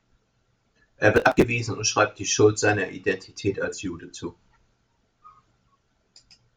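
A speech clip in which the processor falls behind between 1.16 and 1.44 s and misses a long run of buffer deadlines in a row, around thirty of them, which fits buffers of about 10 ms each. Each missed block is simply skipped, leaving a small hard-edged hole, and so many holes packed together turn the speech into a gritty burst of processor overload crackle that tears across the sound and stops once the load eases.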